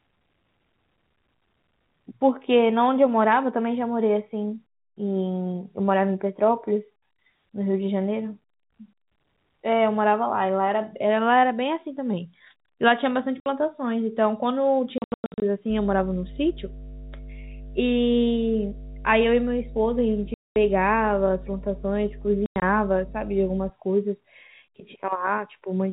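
Packet loss filled with silence at 13.4, 14.98 to 15.42 (scattered), 20.34 to 20.56 and 22.46 to 22.62 s cuts holes in the telephone-band G.711 speech, in steps that fit 20 ms packets. These show as flat waveform gaps and blank vertical spectrogram strips.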